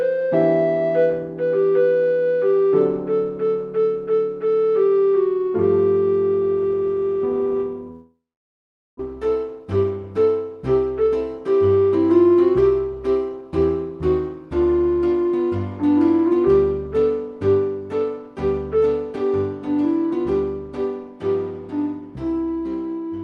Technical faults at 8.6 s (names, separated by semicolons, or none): long network dropout